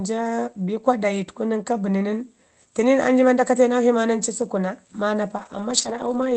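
At 4.41 to 4.47 s, just after "naksjhi maa ndanci", about 40 ms is two lost packets rebuilt from error correction. The decoder played a low-bitrate copy, so there is no gap, only a brief rough, noisy patch. From 5.37 to 6.35 s, a longer 500 ms stretch is rebuilt the same way and sounds coarse and noisy.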